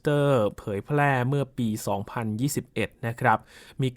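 Nothing goes wrong anywhere in this bit of speech, so there's no fault to point to at any moment.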